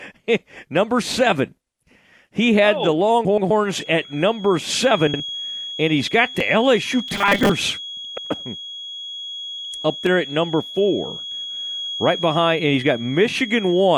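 Just after "had oh the", from 3.25 to 3.51 s, frames out of order swap two neighbouring 128 ms blocks, which fits runs of four frames. The sound jumps forward and then back, making a garbled flutter. On the waveform, the envelope breaks abruptly at three points. On a spectrogram, the harmonic traces stop and restart at those joins instead of flowing. A shorter version, with 64 ms blocks, follows at 5.07 to 5.20 s.

From 7.08 to 7.53 s the speech turns into a rigid, metallic buzz fixed at 200 Hz, though it still roughly tracks the syllables. This robotic sound most likely comes from repeated short buffers. The playback loops a 5 ms slice while about half the real audio is dropped. On the spectrogram, flat, evenly spaced harmonic lines at multiples of 200 Hz replace the natural pitch contours. The waveform shows a strictly periodic pattern.

The same block exchange recurs at 8.05 to 8.31 s and 11.31 to 11.57 s with 128 ms blocks, and at 9.58 to 9.72 s with 64 ms blocks. 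No time is lost at any of these points.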